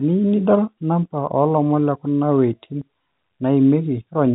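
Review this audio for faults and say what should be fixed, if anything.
Nothing here needs fixing: the speech carries the expected character of G.711 A-law telephone coding at 64 kbps, with content ending around 3.9 kHz and at most a faint trace of the low-level quantisation noise that this format adds.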